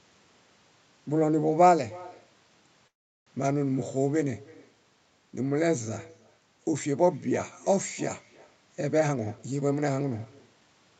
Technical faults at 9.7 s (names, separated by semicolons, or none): echo with no canceller; jitter buffer speed-up